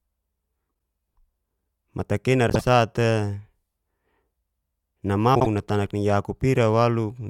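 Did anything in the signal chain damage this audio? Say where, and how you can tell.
Yes. The speech shows frames out of order three times, at 0.69 to 0.78 s, 2.49 to 2.61 s and 5.35 to 5.47 s. Each is a brief garbled flutter. That points to the network or packet-transport stage. Two adjacent runs of about 48 ms each, consistent with two codec frames apiece, were decoded in reversed order, so each stretch plays with its halves exchanged while the overall timing stays intact.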